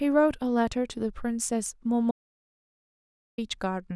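At 2.11 s the speech cuts out abruptly and returns at 3.38 s: an audio dropout to silence lasting about 1.27 s, likely from a lost input link while recording continued. Unlike a natural pause or noise gate, the gap holds silence with no room tone.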